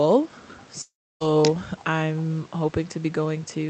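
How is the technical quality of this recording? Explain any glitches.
The speech has one clear glitch: a gap of about 0.4 s that cuts into the audio, heard through a call-codec path whose sound stops at around 8 kHz.

From 0.81 to 1.22 s, the last sound smears into a fading buzz, then drops to near silence before the speech resumes with that stretch missing. The likely cause is a long network dropout: no packets arrived, so the receiver extrapolated briefly and then gave up.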